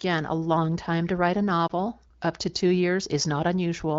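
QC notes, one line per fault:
1.67–1.71 s, lost AMR speech frame: A single frame of about 20 ms failed its checksum after a radio error. The AMR-WB decoder could not use it. It reused the last good pitch and vocal tract settings at reduced gain. That gives a brief dip or warble in the speech. It is too brief to fade into silence. The speech recovers at once, perhaps slightly rough for an instant. The surrounding wideband speech sounds clear, consistent with a higher AMR-WB rate.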